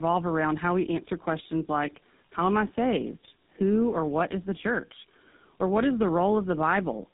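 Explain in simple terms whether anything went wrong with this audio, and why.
Tandem speech coding: throughout the speech, two mobile speech codecs squeezed it one after another, so it sounds rough, warbly and muffled, with nothing above 3.8 kHz.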